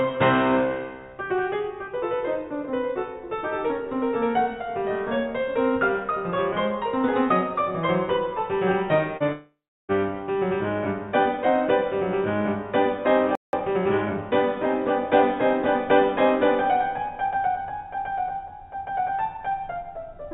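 Short concealed packet loss at 9.17 to 9.23 s: roughly 30 ms of the music failed to reach the decoder in time, and the receiver patched the hole by extending the preceding sound for about 32 ms before blending back into the real signal. It is heard as a brief smear or wobble in the music. The band-limited, grainy call sound, with nothing above 4 kHz, fits a G.711 A-law path.

Long network dropout from 9.32 to 9.92 s: about 570 ms of audio is missing, most likely because nothing arrived over the network for that stretch. The receiver first continues the last sound as a fading buzz, and then for about 340 ms there is only silence. The music resumes further on in the piece, and the lost portion is never played. This follows closely on the earlier short gap.

Playback stall at 13.35 to 13.53 s: the music halts mid-flow for about 0.18 s, likely because the player ran short of data or its playback thread was briefly blocked. 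The output sits silent during that pause, which leads directly into the catch-up that follows.

Time-compressed catch-up from 13.53 to 14.23 s: right after the stall the player works off its backlog by removing small slices of audio and cross-fading across the joins. The music runs at about 1.25 times normal speed while keeping its pitch, so for roughly 0.7 s it sounds hurried. Normal pacing returns at 14.23 s.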